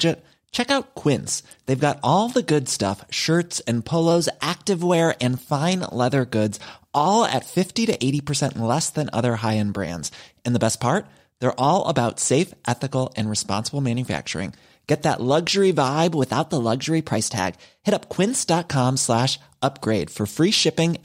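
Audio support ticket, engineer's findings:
Drift correction step, 4.11–4.94 s after "good stuff shirts and": speech runs 5.86% fast, pitch up about a semitone (98.5 cents), then snaps back before "and fine leather goods". Likely clock-sync resampler stepping rate to rebalance buffer.

Drift correction step again, 16.05–18.49 s after "that luxury": same 5.86% speed-up and 98.5-cent rise, longer hold, abrupt return. Likely same resampler correction.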